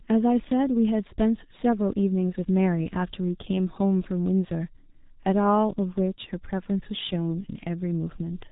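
Throughout, heavy G.723.1 codec damage: a hard spectrogram ceiling at 3.8 kHz, consonants smeared across coarse 30 ms frames, muffled hoarse speech, fitting a 6.3 kbit/s stream.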